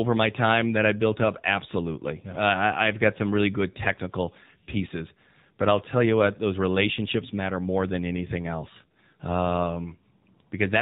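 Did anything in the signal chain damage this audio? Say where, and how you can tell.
Yes: the AMR narrowband mobile codec stage cuts off everything above 4 kHz on the spectrogram throughout. The audible buzzy, synthetic vocal-tract coding fits a low bitrate near 7.4 kbps.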